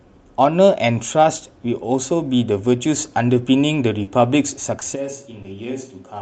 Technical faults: short concealed packet loss; lost packet rebuilt from error correction; switch to a distant microphone

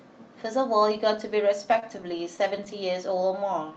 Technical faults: repeated stalls (stutter)

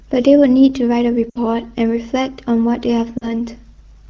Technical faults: lost AMR speech frames

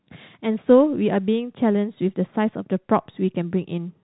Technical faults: none

